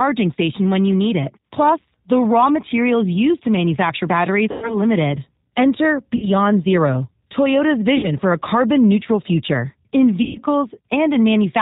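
Throughout, the speech carries plainly audible G.729 codec damage: the 8 kbit/s coder rebuilds each 10 ms frame from a filter, a pitch predictor and a few pulses, so the voice sounds rough and synthetic. On a spectrogram, everything stops sharply at 4 kHz.

VoIP packet loss concealed by the speech codec occurs after "used to manufacture batteries" at 4.52 to 4.78 s, at 6.16 to 6.29 s, at 7.97 to 8.08 s just before "for a carbon neutral", and after "carbon neutral future in" at 10.23 to 10.39 s. The gaps run 100, 60, 60 and 120 ms, which fits runs of lost 20 ms packets. The decoder stretches its last pitch and filter into a fading buzzy tone or coloured noise, seen as a shrinking waveform envelope.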